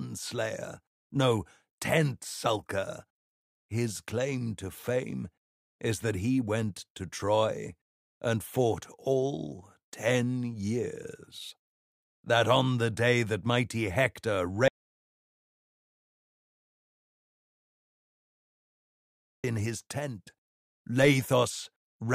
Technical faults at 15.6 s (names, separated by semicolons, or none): audio dropout to silence